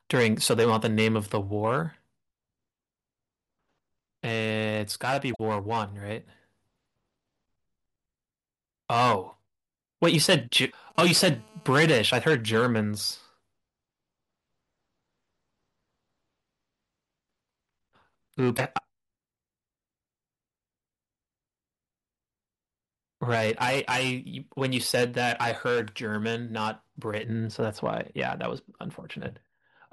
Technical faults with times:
5.32-5.40 damaged data in a compressed stream
10.17-10.92 GSM signalling bursts
10.67-10.73 damaged data in a compressed stream
10.95-12.12 GSM phone buzz
18.54-18.59 damaged data in a compressed stream
27.23-29.93 de-emphasis applied wrongly

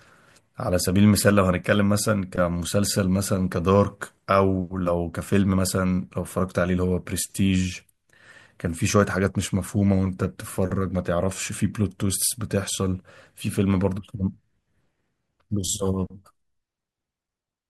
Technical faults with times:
none

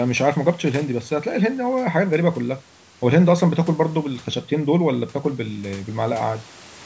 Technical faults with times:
none

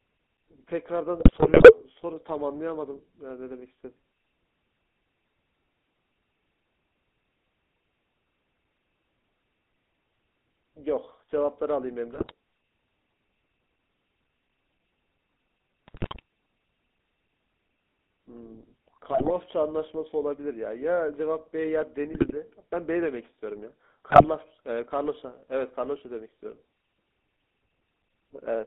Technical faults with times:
0.00-28.66 GSM full-rate codec
1.20-1.83 GSM bit errors
12.12-12.33 GSM bit errors
15.88-16.20 GSM bit errors
19.12-19.31 GSM bit errors
22.12-22.35 GSM bit errors
24.10-24.25 GSM bit errors

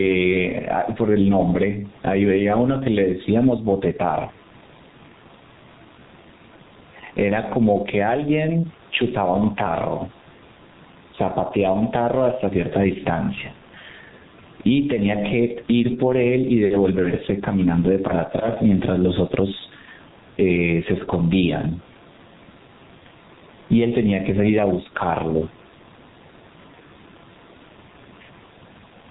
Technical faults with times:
0.00-29.11 gain pumping
0.00-29.11 G.723.1 codec

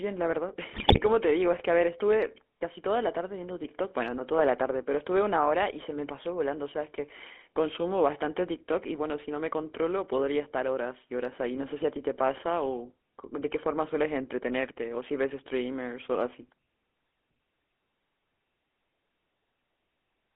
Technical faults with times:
0.00-20.36 GSM full-rate codec
0.72-1.00 GSM bit errors

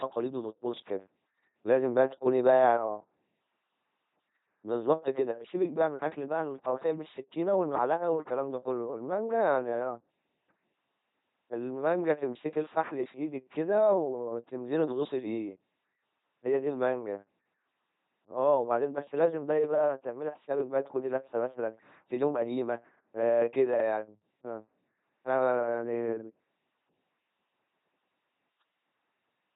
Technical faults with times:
0.00-29.56 LPC-10 vocoder

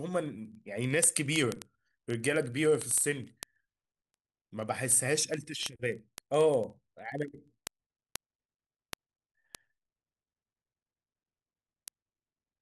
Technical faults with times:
0.13-12.59 word clock ticks

